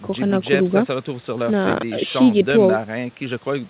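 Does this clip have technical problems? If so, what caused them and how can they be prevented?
No, this clip has no technical problems.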